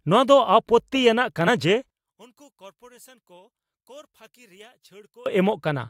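From 1.90 to 5.26 s, the speech drops by about 29 dB to a faint remnant. The likely cause is one channel inverted, cancelling centred sound in mono.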